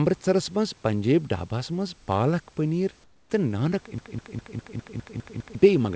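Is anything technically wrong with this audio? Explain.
Yes, there are two faults.

From 3.04 to 3.30 s there is comfort noise in place of the background. For 260 ms, the room's real background noise is replaced by a steady, featureless hiss. It is about 9 dB quieter than the background around it. The likely cause is discontinuous transmission. The sender stopped sending during a pause, and the receiver filled the gap with synthetic noise. The texture of the room drops out, then returns.

From 3.98 to 5.55 s there is a broken-record loop. A fragment of about 203 ms repeats exactly, back to back, eight times. It sounds like a stuck, stuttering pulse. The likely cause is a stalled stream or player that kept resending the last piece it held. The audio that should have played in that stretch is lost. Throughout the clip, nothing is heard above 8 kHz, which fits a wideband call codec such as G.722.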